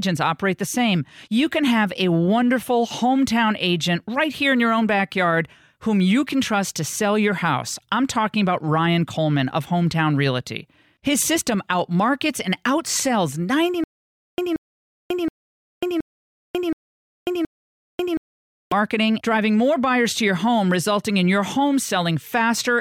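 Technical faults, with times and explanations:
13.84–18.72 s, stutter with silent gaps: after "system outmarkets and outsells", a 180 ms burst of speech repeats six times, each followed by about 540 ms of dead silence, every 722 ms. This is likely a stalled stream replaying its last fragment before running empty, and the audio in between is lost until "driving more buyers to".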